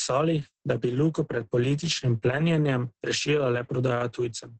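From start to finish the speech carries Opus voice compression in its SILK linear-prediction mode. Nothing reaches above 8.7 kHz, a wideband cut. Heavy damage to the coarsely coded excitation leaves the speech muffled, hoarse and faintly robotic, which fits a bitrate near 10 kbps. A plain low-pass filter would only dull the sound, and MP3-style coding would add swirling, watery artefacts. Here the rasping texture comes from the coarsely coded excitation.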